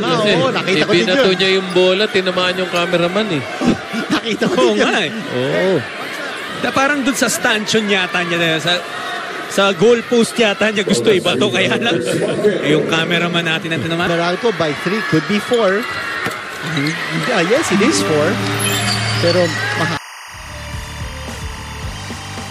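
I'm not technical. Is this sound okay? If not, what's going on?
No. Timecode bleed runs from 17.55 s to the end at 22.51 s. A timing signal from a nearby cable or track, meant to keep equipment in sync, has leaked in, giving a steady chirping warble that flips between two high pitches behind the sound.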